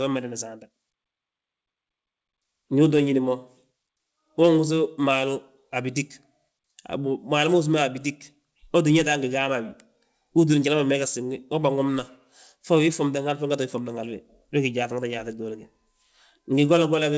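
No technical faults can be heard.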